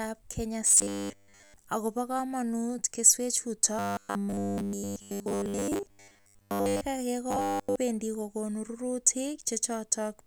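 Speech with robotic sound from repeated short buffers at 0.67–1.56 s, 3.79–6.81 s after "komonut keswechuto", and 7.31–7.76 s. A rigid 100 Hz buzz fits likely repeated 10 ms buffers.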